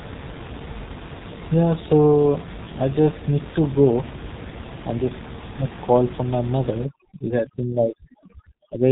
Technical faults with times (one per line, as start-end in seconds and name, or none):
0.00-8.91 G.723.1 codec